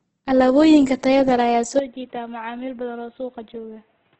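Speech, likely passed through Opus compression in its music mode at a low rate that fits about 12 kbps, leaving everything above 8.1 kHz gone and the voice rough and grainy throughout. At 1.79 s, right after "tayada leh ayaa", the input appears to have been switched to a poorer device. The sound abruptly turns duller and boxier with nothing above 3.8 kHz, drops roughly 10 dB in level, and carries a faint new background noise to the end, with no gap at the switch.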